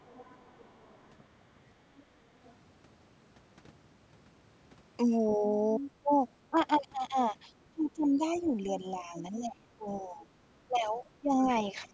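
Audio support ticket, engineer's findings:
Other side's voice leaking through: faint far-end voice at 0.06–1.11 s, 2.00–2.54 s and 10.93–11.47 s, roughly 30–35 dB under the talker. Much louder at 5.29–5.91 s, only about 10 dB down. Likely the AEC not fully cancelling loudspeaker pickup at the mic, residual echo slipping through.

Speech suppressed in double talk: near-end voice ducks while both sides talk. Brief shallow dip at 5.37–5.44 s (a few dB), deeper at 6.03–6.56 s (around 10 dB), then 7.72 s to the end of the clip with drops near 20 dB, about two seconds affected in total. Likely the echo canceller can't separate talker from echo and turns everything down.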